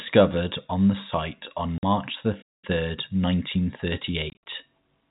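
At 1.78 s the speech drops out for 50 ms. This is packet loss filled with silence. The gap has hard edges. Its length fits five lost 10 ms packets.

From 2.41 s to 2.65 s the speech stops in mid-flow for about 210 ms. This is a playback stall. The player likely ran short of data or was blocked. The output simply goes silent until it recovers.

From 2.65 s to 4.05 s comes time-compressed catch-up. The player works off its backlog by cutting small pieces and cross-fading them. The speech runs about 1.15 times fast, at normal pitch.

From 4.30 s to 4.41 s, packet loss filled with silence returns. About 120 ms is lost, spread over 160 ms. The longest hole is 60 ms. The chopped stretch has hard-edged holes, over the narrow telephone band of the G.711 line.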